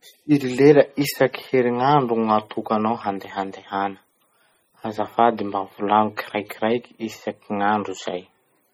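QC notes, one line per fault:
Throughout, MP3 compression: the speech sounds heavily watery and swirly, with smeared attacks, likely from an MP3 encode short of bits, fitting roughly 32 kbps. On a spectrogram, weak components blink on and off as isolated blocks frame to frame, with nothing above 20.6 kHz.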